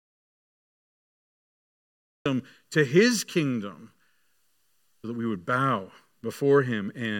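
From the very start until about 2.26 s the clip is dead silent, an audio dropout to silence that is already under way when the recording begins. There is no room tone or noise floor at all, and the speech enters abruptly mid-phrase with "to his kingdom". The likely cause is a lost input or a mute while recording continued. On a waveform this is a flat line; the spectrogram is empty black until the speech starts sharply.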